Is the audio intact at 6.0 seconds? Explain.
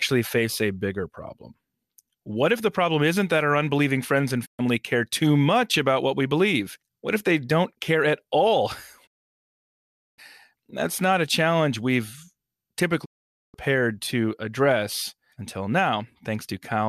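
Yes, at 6.0 seconds the speech plays through intact, with no audible fault at that moment.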